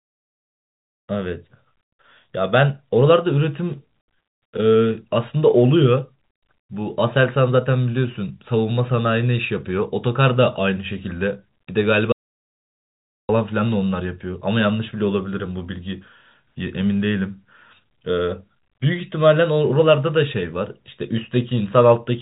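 Speech, band-limited by G.711 mu-law telephone coding so that nothing above 3.8 kHz is present, cuts out abruptly at 12.12 s in an audio dropout to silence that lasts until 13.29 s, so about 1.17 s of speech is lost. The gap is silent with no room tone. On the waveform it shows as a dead-flat line, and on the spectrogram as a fully empty vertical band with hard edges. It most likely comes from the input signal being lost while the recording carried on.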